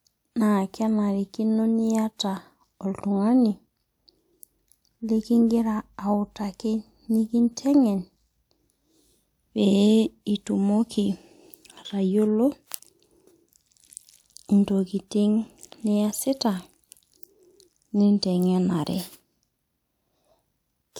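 Nothing goes wrong anywhere in this speech recording, so there's no fault to point out as it runs along.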